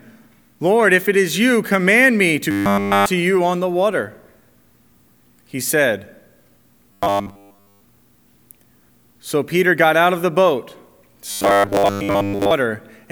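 Robotic sound from repeated short buffers at 2.51–3.08, 6.93–7.81 and 11.31–12.51 s gives a 100 Hz buzz, likely from repeating about 10 ms buffers, shown as evenly spaced harmonic lines and periodic waveform copies.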